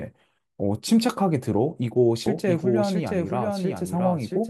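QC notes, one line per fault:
2.26 s to end: doubled audio track. A second full-band copy of the speech enters abruptly and runs to the end, trailing the original by roughly 0.7 s at about 5 dB lower, with no decay or room colour, likely from a slower second capture path.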